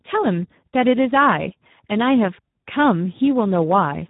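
From start to finish the speech carries heavy Speex codec damage. The coarse, hoarse texture points to a low setting around 8 kbps, where too few bits reach the CELP excitation. Nothing sounds above 3.8 kHz, leaving it narrowband.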